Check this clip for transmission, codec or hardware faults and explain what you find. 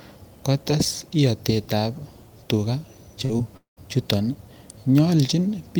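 Two kinds of transmission fault cluster in the middle of the speech, between 3.25 and 3.79 s.

Short concealed packet loss occurs at 3.25–3.31 s, with about 40 ms missing, and at 3.37–3.41 s, with about 20 ms missing. The receiver papered over each gap by extending the preceding sound, giving a brief smear or wobble.

A long network dropout follows at 3.57–3.79 s. Roughly 200 ms of audio is gone, likely because no packets arrived for that stretch. The last sound continues as a fading buzz or hiss, then about 130 ms of near-silence. A spectrogram shows a decaying band ending in an empty gap before the speech resumes.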